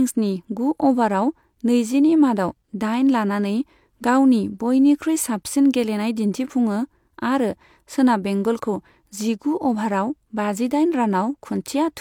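Just a speech recording here, and nothing technically wrong turns up anywhere in it.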